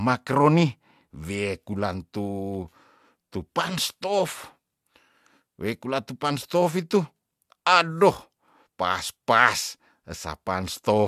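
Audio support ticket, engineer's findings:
No audible technical faults in the speech signal; no dropouts, distortion or timing irregularities heard anywhere in the recording.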